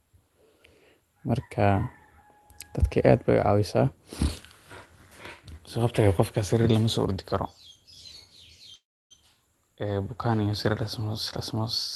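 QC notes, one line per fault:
8.75–9.13 s, call audio freeze: packets were likely held up in transit and the jitter buffer ran dry. The receiver briefly extends the last sound, then falls silent for about 0.32 s. Playback resumes where it stopped with nothing lost, now about 0.35 s later.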